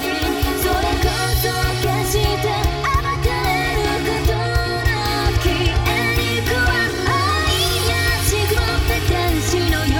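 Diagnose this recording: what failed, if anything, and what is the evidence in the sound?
The fault is channel delay (comb filtering), present for the whole clip. The sound is hollow and phasey from start to finish, with fixed notches that never move. The first deep notch sits around 200 Hz, and further notches repeat up the spectrum at regular spacing. One channel arrives roughly 3 ms late, which points to a buffer offset between channels at the driver or buffer stage. When the two channels are summed to mono, their common content cancels at those evenly spaced frequencies.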